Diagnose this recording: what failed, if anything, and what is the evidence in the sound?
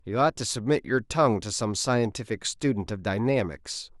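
Nothing here points to a failure at any stage of the chain; the speech comes across without anything a listener could pin on the wiring, the converters, the processing or the transport.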